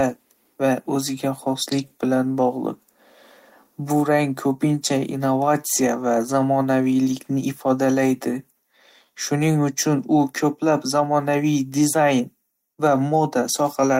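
Clock drift between sender and receiver runs through the whole clip: the sending side's audio clock is about one and a half percent slow relative to the receiver's. Audio arrives a little more slowly than it is played out, so the receiver's jitter buffer keeps draining. Left alone it would run dry, so the playback side has to stretch the incoming speech to stay in step, and that shows up as small timing hiccups recurring at uneven intervals.

Repeated timing corrections follow from that drift, from 0.48 s to 13.41 s. Because the buffer keeps running low, the receiver repeatedly duplicates short slices of audio, always in the same direction, padding the stream by roughly a fifth of a second in total. The speech plays at about 98% of its proper pace across that stretch. Each insertion is small and the spacing is uneven, so they come across as faint stutters and a slightly unsteady, dragging rhythm.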